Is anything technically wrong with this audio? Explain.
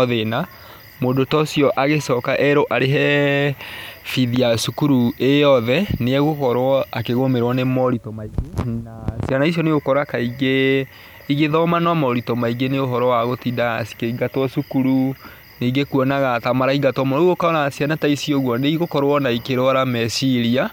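No, nothing is technically wrong.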